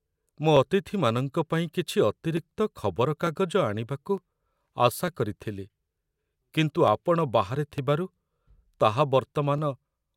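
From 0.57 s to 9.58 s the speech carries a regular train of about ten clicks, spaced 0.90 s apart. The steady spacing points to clock drift buffer slips, most likely two devices running on independent clocks that disagree by roughly 700 ppm. The buffer between them drifts until a block of some thirty samples is dropped or repeated, and each slip breaks the waveform with an audible tick.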